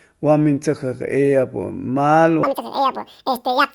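At 2.43 s a wrong sample rate fault begins and lasts to the end of the clip. The speech suddenly runs at double speed and jumps a full octave (12 semitones), sounding squeaky and rushed, which fits 24 kHz audio played at 48 kHz without conversion. On a spectrogram, harmonics and formant bands shift upward with twice their former spacing, and syllables are squeezed to half their length. In the waveform, each pitch period is half as long.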